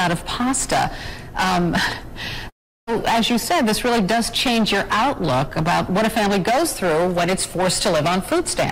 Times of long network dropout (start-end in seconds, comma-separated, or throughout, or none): 2.49-2.89